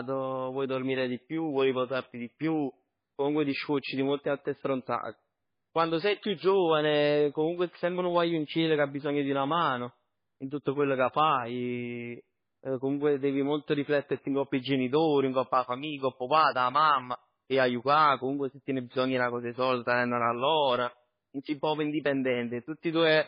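Throughout, heavy MP3 compression leaves nothing above 5 kHz, dulling the speech, while weak frequency lines flicker frame to frame into watery swirl, likely from a bitrate around 16 kbps.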